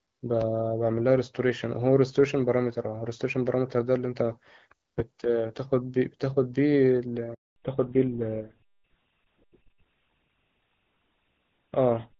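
At 7.34 s the call is passed from one network to another, and for the 220 ms until 7.56 s no speech frames reach the decoder. This handover gap sounds like the speech fading out within a few tens of milliseconds, then dead silence, and whatever was said across that stretch never comes back.

When sound resumes at 7.56 s, the link has not returned to the wideband path heard earlier, which has the light coding texture of AMR-WB at a rate consistent with 12.65 kbit/s. The call has undergone a fallback to narrowband, consistent with a switch to GSM full rate at 13 kbit/s. From there to the end, nothing above 4 kHz is present, so the upper presence that was there before disappears, and the speech sounds muffled, duller and rougher through the final seconds.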